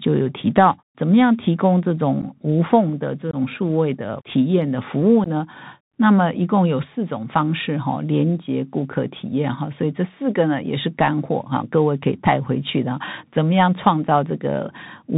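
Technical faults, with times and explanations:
throughout, Bluetooth CVSD headset codec: the link sends the speech as a one-bit up-or-down stream with an adapting step size, which fits a 64 kbps CVSD channel. Nothing above 4 kHz gets through, loud high sounds outrun the step and distort, and s sounds turn scratchy over a granular hiss.
2.22 s, 3.31 to 3.35 s and 5.24 to 5.28 s, unconcealed Bluetooth headset packet loss: a few voice packets between headset and phone went missing each time, about 11, 22 and 15 ms. Nothing filled them, so the speech drops into short holes with abrupt edges and comes back briefly quieter.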